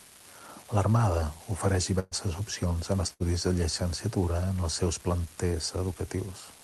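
Speech clip with two kinds of fault. Throughout, an unreliable data bit adds a steady crackle or fizz that continues even in the pauses. One bit of the sample word is being read wrongly in a random share of samples, so each error lands as a spike of identical size, scattered at random through the signal. Because the errors do not depend on the signal level, the noise never drops away during silence. There are also two bursts of packet loss. From 1.99 to 2.14 s, just before "opcions en", about 120 ms of audio is missing. The receiver holds the last sound and fades it over roughly 119 ms, giving a brief held buzz or decaying hiss before speech resumes further on. The second burst runs from 3.13 to 3.23 s, between "opcions en" and "de llicenciatura", and drops about 60 ms, which is concealed over about 65 ms the same way. The top end stops near 12 kHz, which fits an Opus call path at around 32 kbps.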